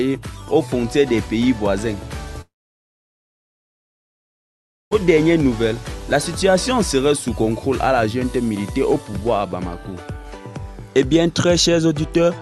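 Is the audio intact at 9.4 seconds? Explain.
Yes, the audio at 9.4 seconds is intact, with no dropout, glitch or other fault at that moment; it simply carries the ordinary character of the call path it went through.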